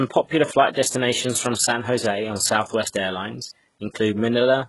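From start to end, the speech carries heavy damage. The treble is rebuilt rather than real. Sibilants sound gritty and lispy, and nothing remains above 11.5 kHz. This is likely HE-AAC compression copying lower bands upward, which fits a bitrate near 12 kbps.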